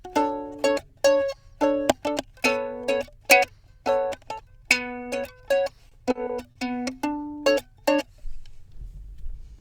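Repeated stalls (stutter) break up this recording of sounds between 5.89 and 6.57 s. In that stretch the audio hesitates four times, the longest hold lasting about 40 ms and the holds adding up to 100 ms, roughly 15% of the span. Packets were reaching the receiver late or more slowly than playback consumed them, so its jitter buffer kept draining. Each time, it stretched the last sound to bridge the wait, so nothing is lost but the passage drags and stutters.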